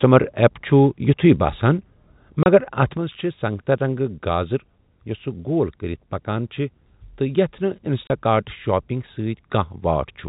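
At 2.43 s the speech is cut by a sudden gap of silence lasting 30 ms, with hard edges where the sound stops and restarts mid-waveform. This is packet loss filled with silence: the gap's length points to a single lost packet, and the receiver played nothing in its place instead of smoothing over the hole. The same 30 ms gap returns at 8.07 s.

From 2.97 s to the end, the speech drops abruptly by about 6 dB and stays quieter. Anything present in only one side of the stereo image would vanish at that point. The cause is likely one channel dropping out, so the mono mix carries only half of what both channels shared. Throughout, the G.711 telephone coding keeps the sound limited to below 4 kHz.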